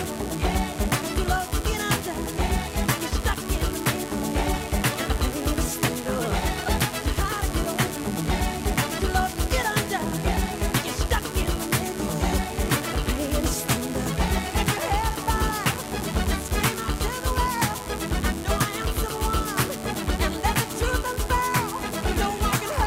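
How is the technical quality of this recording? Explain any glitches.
The recording is marred by one fault that runs from start to finish: mains buzz. Switching spikes from a dimmer, rectifier or unshielded line leak into the signal twice every 50 Hz cycle, stacking harmonics into the kilohertz range. The result is a constant raspy buzz sitting roughly 15 dB below the wanted sound.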